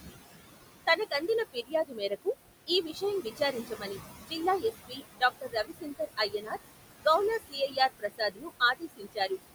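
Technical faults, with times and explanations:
Throughout, noise suppressor artifacts: the room noise pumps down about 19 dB between phrases and rises back under speech, as bands judged steady noise are cut frame by frame.
0.87–2.27 s, 2.67–6.57 s and 7.4–9.31 s, speech cut by the noise suppressor: soft consonants and word endings sound swallowed, dropping about 20 dB, because the suppressor took them for noise.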